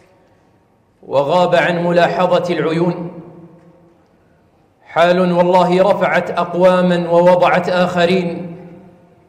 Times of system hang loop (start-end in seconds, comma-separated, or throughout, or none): none